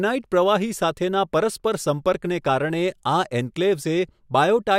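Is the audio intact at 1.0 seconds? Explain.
Yes, the speech at 1.0 seconds is intact, with no fault at that moment.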